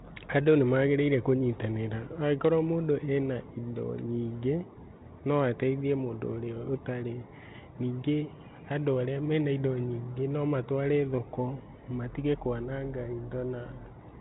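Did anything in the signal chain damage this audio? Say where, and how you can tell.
No, nothing in this speech stood out on listening as damage from any stage of the signal chain.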